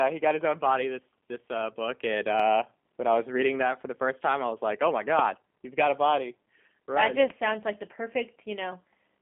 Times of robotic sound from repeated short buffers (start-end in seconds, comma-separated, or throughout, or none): none